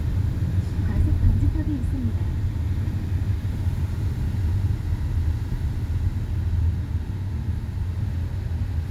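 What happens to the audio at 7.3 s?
Nothing goes wrong at 7.3 s; the sounds carry on intact through that moment with no dropout, glitch or distortion.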